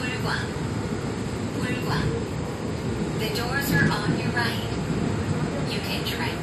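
Throughout, the sound has nothing above 14 kHz and carries smeared low-bitrate artefacts, likely low-bitrate audio saved at a high bitrate, consistent with a 48 kbit/s AAC source re-encoded as 256 kbit/s MP3. A spectrogram shows a flat ceiling at 14 kHz.

From 3.78 to 3.92 s, loose connector crackle from a contact making and breaking chops the signal into irregular scratchy bursts, visible as jagged spikes and dropouts in the waveform.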